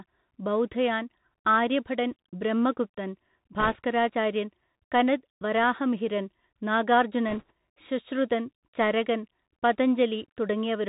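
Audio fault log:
Throughout: Bluetooth CVSD headset codec. The speech is narrowband with nothing above 4 kHz, which fits a 64 kbps CVSD link. Its one-bit delta steps cannot keep up with loud high content, so s sounds turn scratchy over a granular hiss. This is slope overload, not packet loss, because the sound never drops out.
3.60–3.78 s and 7.29–7.51 s: bit errors on a Bluetooth voice link. A crackly rushing noise rides over the speech for about 0.2 s each time, at an error rate of around 2 percent. Each flipped CVSD bit moves the signal by one adaptive step that grows with the speech level, and the effect dies away, so the noise is diffuse rather than the sharp clicks of dropouts or digital spikes.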